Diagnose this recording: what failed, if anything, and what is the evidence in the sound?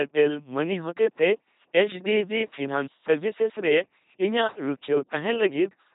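The failure is at the codec stage: an LPC-10 vocoder for the whole clip. The speech has a buzzing, mechanical, robotic quality throughout, with nothing above 3.8 kHz. Each stretch is synthesised as either fully voiced, from a pulse train, or fully unvoiced, from noise, then shaped by a short all-pole vocal tract filter. This flattens natural timbre and mixed excitation. The damage is heavy, which fits a parametric coder running at 2.4 kbit/s.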